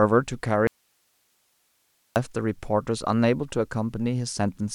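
From 0.67 to 2.16 s, an audio dropout to a faint residue abruptly leaves only hiss about 45 dB down, likely a lost feed, not a fade.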